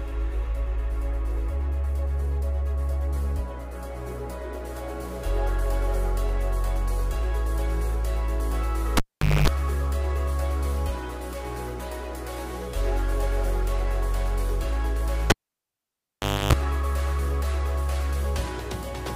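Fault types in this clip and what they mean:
Cable pulled and plugged in: a pop, near silence for 0.45 s and then 1.18 s, a 50 Hz buzz burst, another pop. A live lead is unplugged and reinserted, buzzing while only its tip touches.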